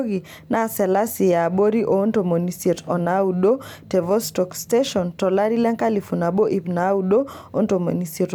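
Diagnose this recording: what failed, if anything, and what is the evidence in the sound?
Nothing failed: no stage in the chain, from capture through playback, leaves any audible trace of a fault anywhere in this speech recording.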